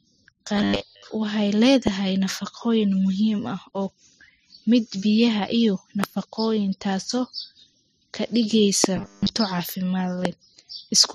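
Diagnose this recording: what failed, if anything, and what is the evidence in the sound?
The speech turns into a rigid metallic buzz from 0.57 to 1.10 s and again from 8.97 to 9.31 s: robotic sound from repeated short buffers. The buzz sits at 100 Hz, which fits a 10 ms chunk being looped. Most of the real audio there gets skipped, likely a driver or buffer underrun.

There are four loud pops, at 1.87 to 1.89 s, 6.04 to 6.06 s, 8.84 to 8.86 s and 10.25 to 10.27 s. Each is a single sharp hit about 15 to 20 dB above the speech, which carries on underneath. That points to a likely voltage step or driver glitch in the analogue or driver stage.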